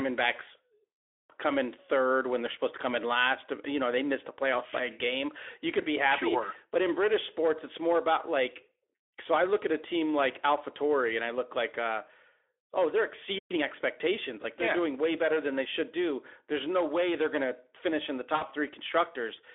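At 13.38 s the speech cuts out mid-flow. Silence holds for about 120 ms, until 13.51 s. This is a playback stall. The likely cause is that the player ran short of buffered data, or its output thread was held up. Nothing reaches the output during the gap.

Right after, from 13.51 s to 13.63 s, comes a time-compressed catch-up. The player clears the backlog the stall created. It drops small slices of audio and cross-fades the remainder. The result runs at twice normal speed for that stretch. Pitch stays where it was. The speech sounds briefly hurried.

At 18.35 s a short dropout in the stream is covered by the decoder. This is VoIP packet loss concealed by the speech codec. About 60 ms of audio goes missing, up to 18.46 s. That length fits three 20 ms frames. The decoder extends its last pitch and filter settings to fill the hole, turning down the level each frame. This gives a brief stretched sound, a buzzy tone or coloured noise that fades. 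The speech stays weak or distorted just after, as the decoder rebuilds its state. Around all this, the Speex coding itself sits on a narrow line band of about 300 Hz to 3.5 kHz, with light codec roughness.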